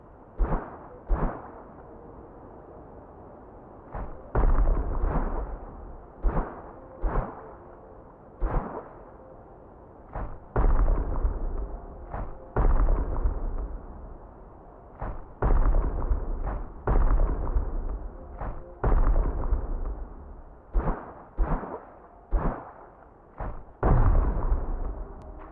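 Nothing in the audio stood out as a technical problem on listening.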